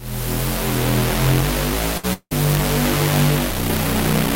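A recording of everyday sounds with two network faults close together. From 1.97 to 2.05 s a burst of packet loss has the receiver stretch the preceding sound into a short fading tail of about 59 ms, after which the audio resumes roughly 60 ms further on. It never decays to silence, which separates it from the later fault. From 2.13 to 2.33 s there is a fill of about 175 ms that fades and then gives way to roughly 60 ms of true silence, and about 160 ms of audio is skipped. The return also lands with a slight shift in timing. This is likely a long network dropout, where nothing arrived for long enough that concealment ran out rather than just bridging a brief gap.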